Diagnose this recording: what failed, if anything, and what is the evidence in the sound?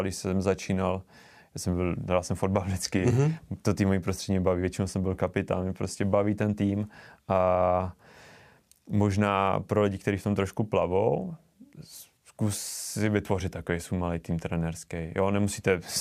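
Nothing in the recording stood out as a failure on listening, so there is no stage to point to and no evidence of a fault to report.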